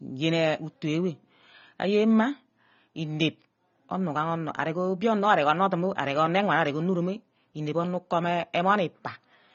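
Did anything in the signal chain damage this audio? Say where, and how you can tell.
Yes, at the codec stage: AAC compression is likely, throughout the speech. Nothing survives above 6.9 kHz, so sibilants sound dull and fizzy, which fits a low bitrate near 24 kbps. A spectrogram shows a flat ceiling at 6.9 kHz.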